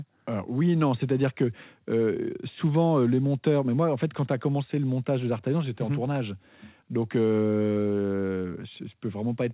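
No faults are audible in the speech; the top end stops at 4 kHz, which is simply the band limit of the narrowband call path and fits G.711 mu-law at 64 kbps.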